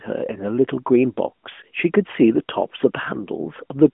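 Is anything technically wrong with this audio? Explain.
No, nothing is technically wrong: the speech arrives as an ordinary narrowband mobile call coded with AMR-NB, with the expected telephone band of roughly 200 Hz to 3.4 kHz, nothing above about 3.6 kHz, and only the light coding texture of a higher-rate mode.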